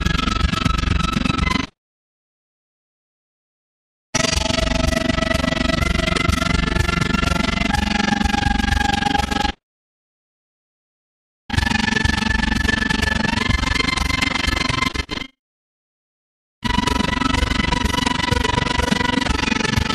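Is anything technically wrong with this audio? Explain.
Yes, there's overlap-add ripple running through the whole clip. At some stage the audio was chopped into windowed frames and stitched back together, but the overlap between the windows doesn't add up to a steady gain, so the level swings once per frame. Here that's around 20 times a second, and the dips are deep, about 60 dB. You hear it as a fast, rough flutter, almost a tremolo chopping the sound.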